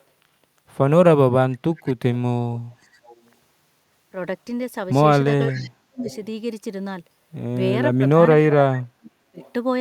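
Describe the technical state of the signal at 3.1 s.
At 3.1 s a faint, delayed copy of the speech trails behind the live talker, arriving about half a second late (513 ms) and sitting far below the main speech, roughly 30 dB down, as a brief ghostly scrap from 2.94 to 3.16 s. This is likely an echo leak: one end of the call was on a loudspeaker, and its echo canceller let a residue of the picked-up far-end sound return down the line.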